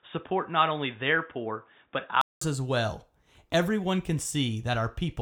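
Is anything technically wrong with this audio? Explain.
Yes. From the start to about 2.41 s, the recording shows an input switched to a poorer device, likely a move between a secondary microphone or headset call profile and the main input. That narrower device path carries nothing above 3.8 kHz, so the speech sounds dull and boxy until it opens up again after a gap of about 200 ms at the switch. The loudness stays roughly the same across the change, and a faint new noise floor sits far below the speech.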